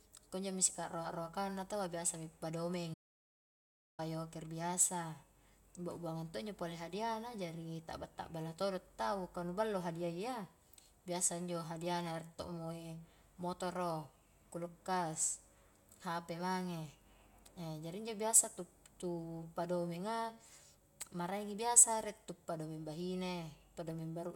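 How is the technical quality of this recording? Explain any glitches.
There's one clear glitch. An audio dropout to silence runs from 2.94 to 3.99 s: about a second of speech vanishes into dead digital silence, likely a lost input, before "yoker biasa".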